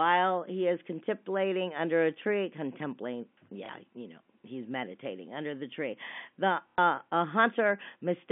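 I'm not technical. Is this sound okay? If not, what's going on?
No. There is packet loss with the last packet repeated, at 3.66 to 3.69 s, between "under a tree contemplating" and "you know he's meditating", and again at 6.70 to 6.78 s. Pieces of the sound went missing on the way, and the receiving end filled each gap by replaying the last piece it had. That makes a small blip of about 30 ms the first time, and a longer 90 ms robotic stutter the second.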